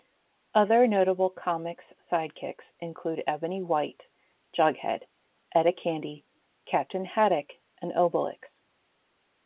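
Speech carried over a G.711 A-law telephone path at 8 kHz sampling, with the expected 4 kHz bandwidth ceiling and low level-tracking quantisation noise, and no technical faults.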